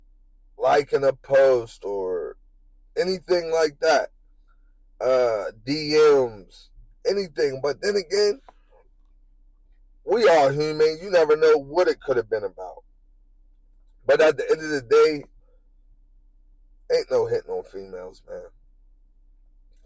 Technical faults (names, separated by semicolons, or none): none